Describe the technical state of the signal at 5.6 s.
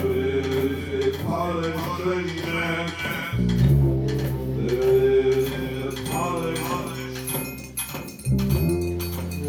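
At 5.6 s the signal is intact, with no audible fault at that point.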